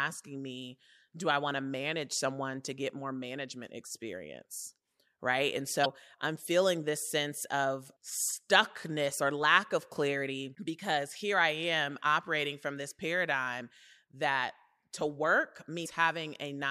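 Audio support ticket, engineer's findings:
Damaged data in a compressed stream: brief glitches, 5.82–5.86 s and 15.82–15.86 s. Decoder loses frame sync on corrupt bytes. Spectrogram shows brief vertical disruptions; waveform shows abrupt discontinuities.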